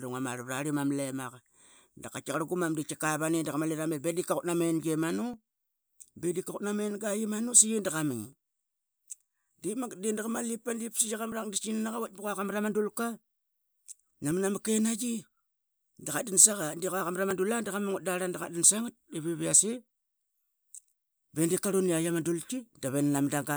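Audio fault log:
2.34, 5.34, 8.33, 11.32 and 17.31 s: audio missing between chunks. There are tiny skips, each just a few milliseconds, spaced at multiples of about 3 s, with the two sides butted together. This is likely a recorder dropping a sliver each time it swaps 3 s chunks.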